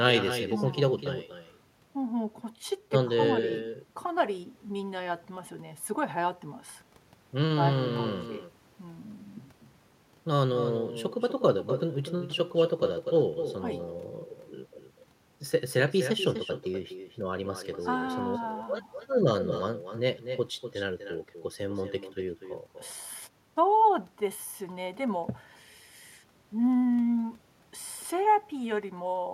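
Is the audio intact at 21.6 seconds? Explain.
No. Echo with no canceller runs throughout: the far end's loudspeaker feeds its microphone, returning the speech roughly 300 ms later, about 8 dB quieter, visible as delayed copies trailing each waveform burst.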